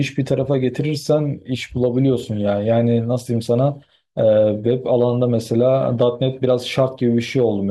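No audible fault turns up anywhere in the recording.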